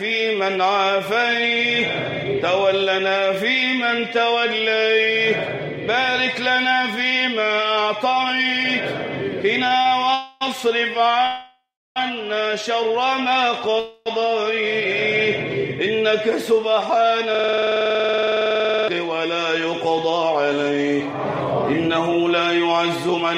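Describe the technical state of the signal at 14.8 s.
At 14.8 s the signal is intact, with no dropout, clipping, glitch or other technical fault to be heard.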